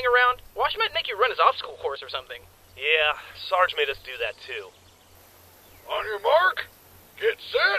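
At 1.97 s the level falls abruptly by about 6 dB. It stays down for 50 ms and comes back at 2.02 s. The dip is short and hard-edged, heard as a brief drop in level. Anything that sat only on one side vanishes for that moment. The likely cause is one channel dropping out. With one stereo side lost, the mono sum keeps only half of the shared material, which gives the 6 dB step.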